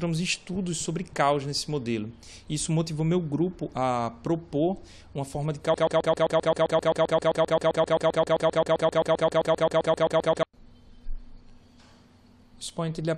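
At 5.74 s the sound snags into a rapid stutter, a 131 ms fragment replaying exactly, back to back, about 36 times until 10.43 s, giving a mechanical, machine-gun chatter with no forward motion. This is a broken-record loop, likely caused by the player, encoder or stream stalling and resending the last fragment it held. Whatever audio belonged in those nearly five seconds never arrives and is simply lost.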